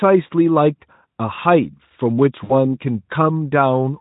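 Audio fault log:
2.43–2.53 s VoIP packet loss concealed by the speech codec: about 60 ms of speech is missing, so the decoder repeats its last pitch and filter, leaving a brief buzzy or noisy, fading stretch.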